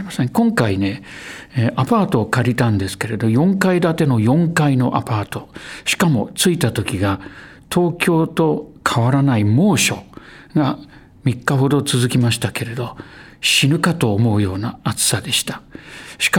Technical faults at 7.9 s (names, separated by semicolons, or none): none